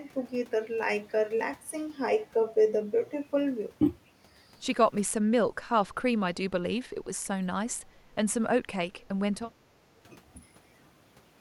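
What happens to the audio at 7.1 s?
Right around 7.12 to 7.16 s the speech briefly ducks, dropping by about 20 dB for roughly 40 ms. That's speech suppressed in double talk, likely an echo canceller that couldn't tell the near talker from loudspeaker echo while both sides spoke, so it pulled everything down.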